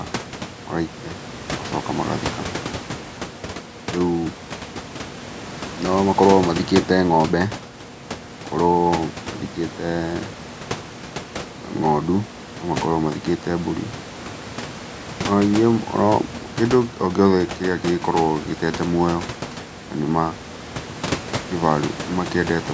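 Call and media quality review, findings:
Nothing stood out on listening to this speech recording: the call microphone processing tops out at 8 kHz, and the room noise sits about 15 dB below the speech.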